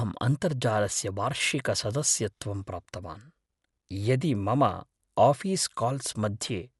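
A speech recording with plainly audible codec damage from start to finish: the top of the band stops dead at about 11.4 kHz, leaving it dull, and a rough, fluttering noise clings around the voiced tones. That combination points to Dolby Digital compression as the likely cause, at a rate that fits something near 64 kbps. Unlike a simple low-pass filter, the band-limiting comes with noise filling the starved frequency lines, which is what makes it sound rough rather than merely muffled.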